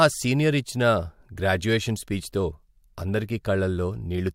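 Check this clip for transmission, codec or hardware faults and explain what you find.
No faults turn up on checking this clip, so there is nothing to explain.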